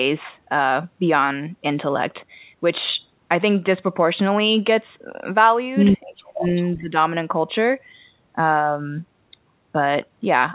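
Speech suppressed in double talk, 6.13 to 6.45 s: the voice drops sharply, by about 40 dB at its deepest, for roughly a third of a second, likely because the echo canceller could not separate this talker from loudspeaker echo while both sides spoke, and turned everything down. Echo leak, 6.43 to 6.7 s: a faint delayed copy of the voice follows about 388 ms behind, around 15 dB below the speech. It is likely a loudspeaker echo the far end's canceller failed to remove and sent back. Speech suppressed in double talk again, 6.77 to 6.93 s: a shorter, shallower dip of about 10 dB lasting roughly 150 ms, with the same likely cause of overlapping talk.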